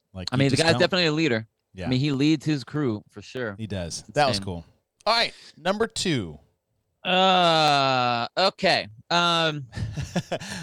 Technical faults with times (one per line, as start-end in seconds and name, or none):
0.29-10.14 clock drift buffer slips